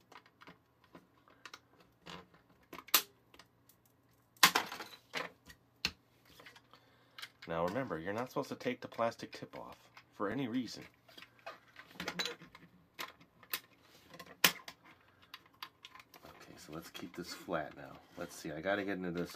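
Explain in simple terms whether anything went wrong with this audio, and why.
Something went wrong in how the audio was handled: it was cut into 3-second pieces, and each piece started 20 milliseconds before the previous one ended. This fault is called overlapping chunks. At every join, a tiny slice of sound plays twice, which you hear as a brief click or stutter. It happens at 1.26–1.28, 4.28–4.30, 7.30–7.32, 10.32–10.34, 13.34–13.36 and 16.36–16.38 seconds, about every three seconds.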